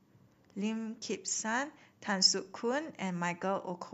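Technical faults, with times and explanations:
No technical faults heard.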